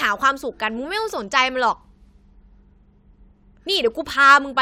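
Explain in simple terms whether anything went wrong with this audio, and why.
Nothing went wrong here: the speech recording comes through with its signal intact, with no technical problems to be heard anywhere in it.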